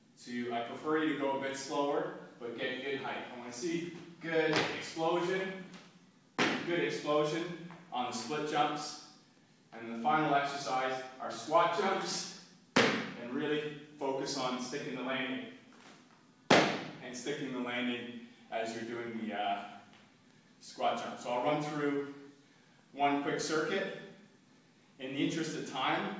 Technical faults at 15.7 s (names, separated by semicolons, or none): none